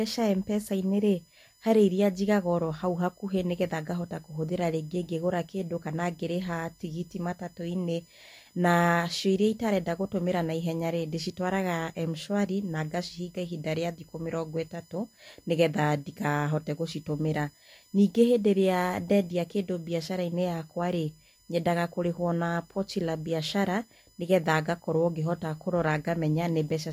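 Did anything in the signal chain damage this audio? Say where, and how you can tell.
Yes, USB whine runs under the speech throughout, a fixed tone at 1 kHz with harmonics, strongest at 5 kHz, roughly 35 dB below the speech. This points to the analogue wiring: the USB bus's 1 ms frame current leaks in through power or ground. On a spectrogram it appears as steady horizontal lines at multiples of 1 kHz.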